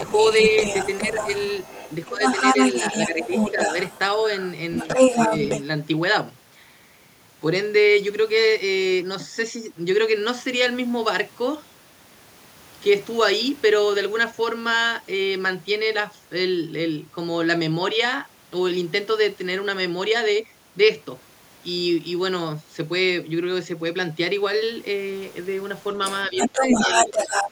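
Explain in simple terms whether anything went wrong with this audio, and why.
For the first five and a half seconds, and again from 26.0 to 27.5 s, a second voice can be heard underneath the main talker, about as loud as the talker. This is the other side's voice leaking through. The likely cause is that the talker's device was playing the far end on a loudspeaker, the microphone picked that sound up again, and the echo canceller failed to remove it before sending.

While that second voice is present, the main talker's own voice briefly sinks: at 2.1 to 2.2 s, at 3.1 to 3.8 s, at 4.8 to 5.3 s, and from 26.3 s to the end. The dips at 2.1 s and near the end are clearly deeper, and the others are milder. This is speech suppressed in double talk. With both sides talking at once, the echo canceller likely could not tell the talker apart from the echo and turned everything down together.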